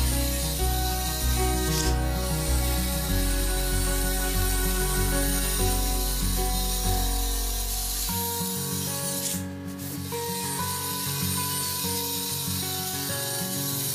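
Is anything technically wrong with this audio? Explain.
Yes. Clock drift buffer slips, 2.24 to 13.12 s: a regular click every 2.18 s, likely from two clocks about 70 ppm apart dropping or repeating a few samples.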